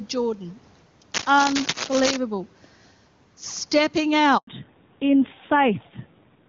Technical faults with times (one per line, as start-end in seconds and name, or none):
0.00-6.48 gain pumping
1.14-2.17 cable scratch noise
4.37-4.47 handover gap
4.47-6.48 fallback to narrowband